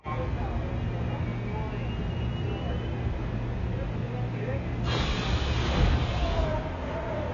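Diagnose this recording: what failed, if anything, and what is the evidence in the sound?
The whole recording sounds dull and smeared, with nothing above 7 kHz and a warbling, fizzy texture clinging to sustained sounds and hissy detail from start to finish. The fault sits at the codec stage and is likely AAC compression, heavily applied: AAC-LC starved of bits quantises its frequency lines coarsely, lowers its cut-off and leaves spectral holes. The damage is severe enough to suggest a very low bitrate, around 12 kb/s.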